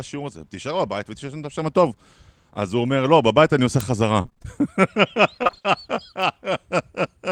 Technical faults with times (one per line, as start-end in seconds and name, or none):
3.80 bit error spike
4.21-4.46 repeated packet loss (robotic sound)
5.43-5.66 repeated packet loss (robotic sound)